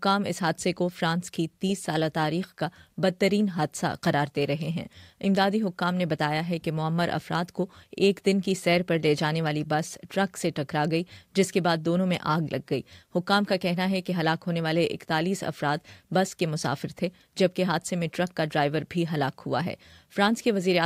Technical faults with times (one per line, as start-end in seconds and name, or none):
none